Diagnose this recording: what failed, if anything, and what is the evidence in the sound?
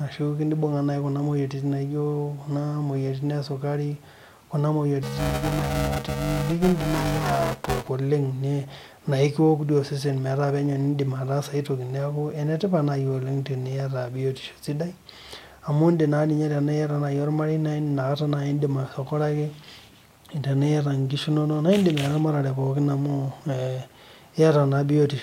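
Buffer tearing at the driver or buffer stage, from 5.03 to 7.89 s. The speech takes on a robotic buzz at 345 Hz, which fits a 128-sample buffer. The writer and reader pointers have crossed, so roughly half of each period replays audio about 5 ms old, joined by hard edges on both sides. A waveform shows a step discontinuity every 2.9 ms. A spectrogram shows a comb of harmonics spaced 345 Hz apart wherever speech is present.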